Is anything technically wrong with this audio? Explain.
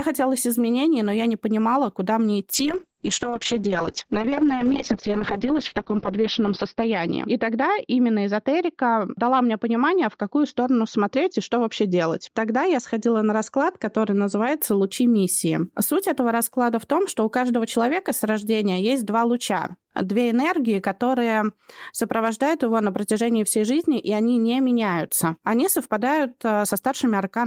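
Yes. From 2.54 to 14.65 s, just after "не понимала куда мне", the speech turns rough, watery and muffled, with highs cut above 6 kHz. This is a call bitrate drop, consistent with the encoder falling from about 32 to 7 kbps.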